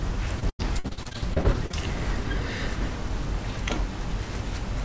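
From 0.40 to 1.75 s, repeated packet loss (robotic sound): packets kept dropping, and each gap, up to 93 ms, was patched by extending the preceding sound, leaving it choppy and robotic.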